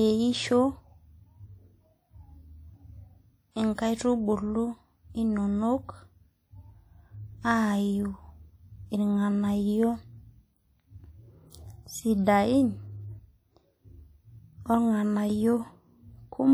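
WMA compression runs through the whole recording, from start to finish, and is likely the cause of the plainly audible damage on the speech. A transform codec working on long blocks lets its quantisation error smear over tens of milliseconds, so the speech sounds ringing and washy, with a hiss that swells and fades with the level. The damage points to a bitrate around 48 kbps, though content still extends to 20.1 kHz.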